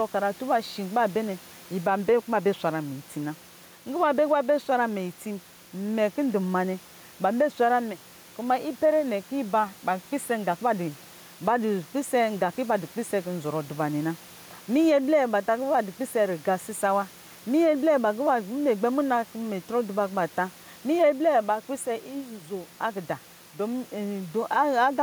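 Throughout the speech, the background rises in each pause and sinks under every loud syllable, a swing of roughly 5 dB, leaving the room noise, sitting about 30 dB below the speech, audibly breathing. This is gain pumping, likely from input gain set too high and a fast limiter clamping down on peaks.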